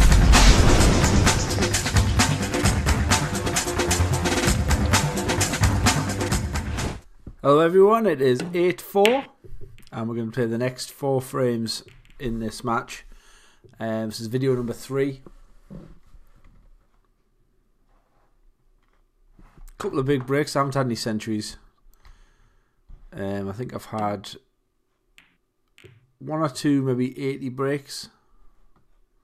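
No technical faults are audible.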